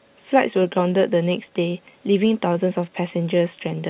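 Throughout the speech, the sender's clock runs about 3 percent slow relative to the receiver's, so this clock drift between sender and receiver keeps draining the jitter buffer. The receiver has to stretch the incoming audio to keep playback fed, leaving the timing faintly unsettled.

From 0.59 s to 3.82 s, repeated timing corrections duplicate short pieces to make up the shortfall, slowing the speech to about 97 percent speed and adding roughly a tenth of a second in total. These are heard as slight, unevenly spaced hiccups and a subtly dragging tempo, all over a G.711 A-law call path that carries nothing above 4 kHz.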